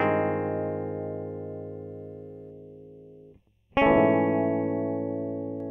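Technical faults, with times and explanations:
2.50–5.60 s, channel delay (comb filtering): one channel lags roughly a third of a millisecond before mono summing, notching evenly spaced frequencies from around 1.5 kHz and leaving the music hollow and phasey.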